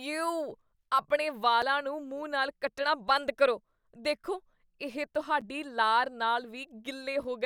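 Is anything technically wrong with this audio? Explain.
Yes. A block of digital silence appears twice in this speech, at 1.62 s, right after "ਯੇਉ ਆਪਣੇ", and at 5.41 s, just before "ਲਾਰ ਨਾਲ". Each time the signal drops straight to silence and returns with no fade, most likely because the output buffer was not filled in time. The first hole lasts 5.8 ms, which fits a 256-sample buffer, and the second 8.4 ms. Both gaps are too short to hear as holes, so they come across as a tick or dip.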